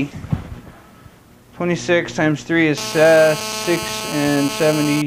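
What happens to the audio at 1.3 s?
Nothing goes wrong at 1.3 s; the audio plays through that moment intact, with no dropout, click or other fault.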